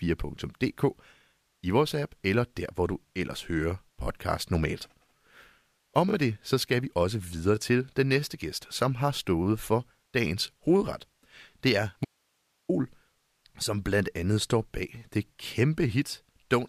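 At 12.05 s the speech cuts out abruptly and returns at 12.69 s, an audio dropout to a faint residue lasting about 0.64 s. During the gap only hiss remains, roughly 45 dB below the speech level, and there is no fade at either edge. The likely cause is a brief loss of the incoming signal while the downstream path stayed live, so the open input's noise floor carried on through the break.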